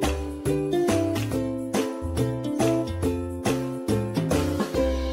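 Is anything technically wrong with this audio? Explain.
No, nothing technically wrong turns up here; it all sounds fine from beginning to end.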